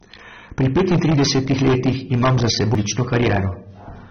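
From the start, every loud syllable carries a harsh, crackling fuzz. This is hard clipping: the speech is driven about 13 dB past full scale, so around a sixth of the samples are cut flat.

The whole recording also sounds dull and smeared, with a fizzy, warbling texture and nothing above 6.3 kHz. This is likely AAC compression, consistent with AAC-LC at a low bitrate near 27 kbps.

At 2.75 s, just after "petintridesetih letih imam za", a brief tick and a sudden jump mark a CD skip. The laser lost its track, the player muted for about 5 ms, and playback resumed from a different point on the disc.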